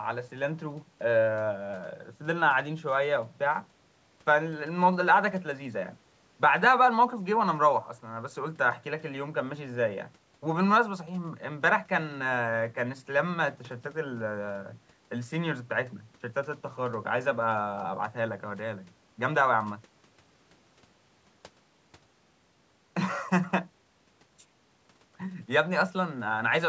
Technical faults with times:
none

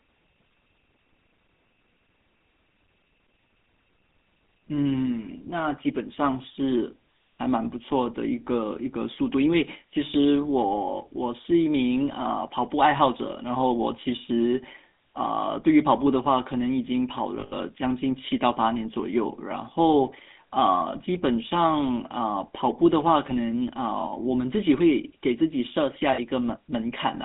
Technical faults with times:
0.00-27.25 GSM full-rate codec
17.40-17.54 lost GSM frames
26.14-26.20 lost GSM frames

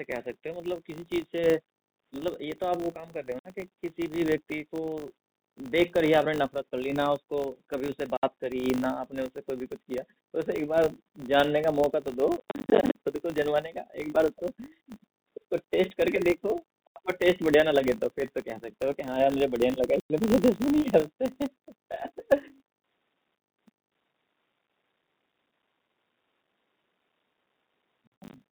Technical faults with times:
0.00-28.52 filter restarted on every block
3.39-3.45 packet loss filled with silence
8.17-8.23 packet loss filled with silence
12.37-12.95 packet loss filled with silence
16.87-16.96 packet loss filled with silence
20.00-20.10 packet loss filled with silence
28.07-28.33 packet loss filled with silence

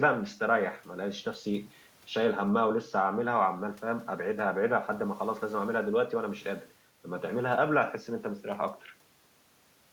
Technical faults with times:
none

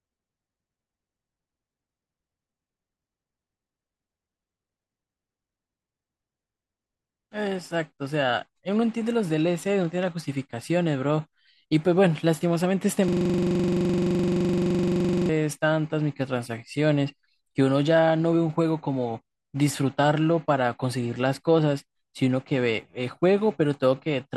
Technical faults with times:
13.08-15.29 system hang loop

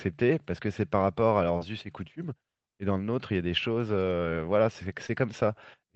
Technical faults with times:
1.57-1.63 short concealed packet loss
5.07-5.11 short concealed packet loss

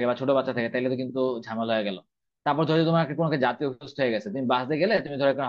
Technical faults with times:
none

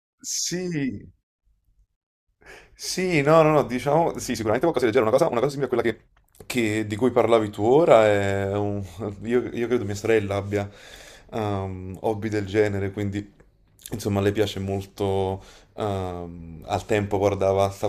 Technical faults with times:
4.26-6.26 time-stretched section

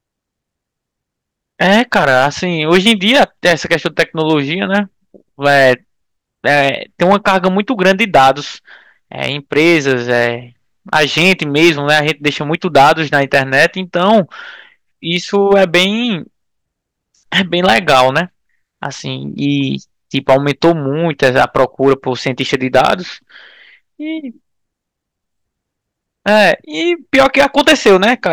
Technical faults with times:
0.00-28.32 hard clipping

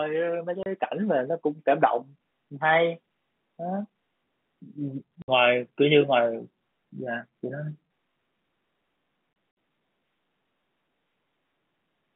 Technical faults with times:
0.63-0.66 packet loss filled with silence
5.22-5.28 packet loss filled with silence
9.33-9.57 packet loss filled with silence

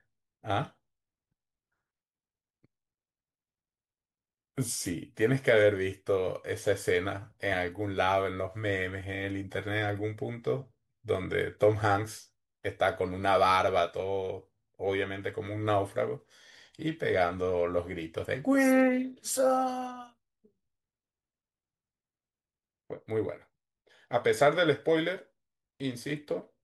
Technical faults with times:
none

